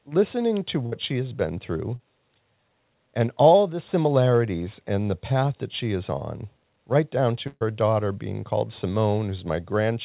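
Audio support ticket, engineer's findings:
Burst of packet loss at 0.86–0.94 s, between "listening to" and "she has been through". Jitter buffer/PLC held the last sound for about 60 ms, fading, and roughly 60 ms of audio is gone.

Same burst of packet loss again at 7.47–7.63 s, after "is on right down", before "daughter being called". About 134 ms concealed, a brief dead gap of about 20 ms, and about 140 ms of audio skipped.

Short concealed packet loss at 1.96–2.01 s, right after "she has been through". The decoder patched about 33 ms by extending the previous sound, so you hear a quick smear where 40 ms went missing.

Band stops at 4 kHz, which fits G.711 A-law at 64 kbps on the call path.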